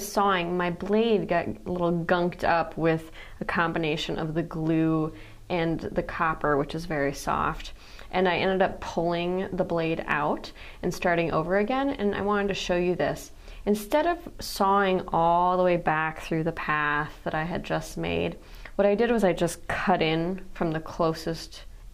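No technical faults are audible.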